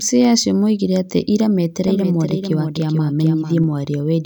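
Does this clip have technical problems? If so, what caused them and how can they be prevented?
Yes. Right after "acio moigire atĩ ira", from 1.88 s to 3.64 s, a doubled audio track appears: the speech is heard twice, with a clean full-band copy trailing the original by roughly 400 ms and sitting a few decibels lower. The echo has no room colour and cuts in and out abruptly. It is likely caused by the signal being captured a second time through a slower path, or by an edit that left two copies offset. Monitoring only one capture route and checking edit points for duplicated regions prevents it.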